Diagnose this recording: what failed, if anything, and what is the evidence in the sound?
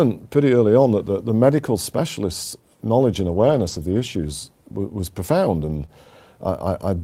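Three stretches of speech turn rough and noisy without ever dropping out: briefly at 0.97–0.99 s, right after "pretty early on"; for a long run from 3.19 to 4.01 s, following "the medical specialists' knowledge"; and again from 5.65 to 5.83 s, after "was profound". This is lost packets rebuilt from error correction, a network fault recovered in the codec. Opus packets went missing, and the decoder played the low-bitrate copies carried in the following packets. The coarser copies explain the grain. The long middle stretch fits about twenty separate 20 ms packets lost across it.

Immediately after the third rebuilt stretch, at 5.85–5.90 s, the sound briefly smears and wavers before the real signal resumes. This is short concealed packet loss. About 20 ms never reached the decoder in time, and this time no redundant copy was available. The receiver extrapolated from the preceding sound to fill the hole, then cross-faded back into the audio that arrived. 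That bridging accounts for the momentary blur.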